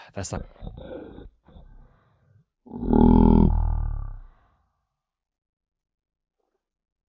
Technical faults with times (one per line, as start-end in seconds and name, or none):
0.37-7.10 wrong sample rate